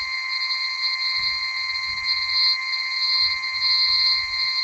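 From start to finish the music sounds grainy and rough, with tones smeared into noise. This points to Opus compression, likely at a very low rate around 16 kbps. A spectrogram would show content cut off near 8 kHz, with bands filled by noisy texture rather than gaps.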